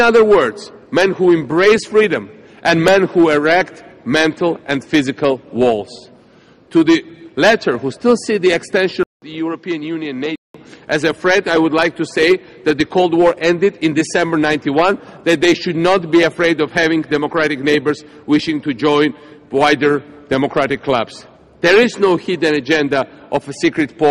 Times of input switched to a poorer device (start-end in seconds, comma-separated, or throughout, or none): 9.03-10.54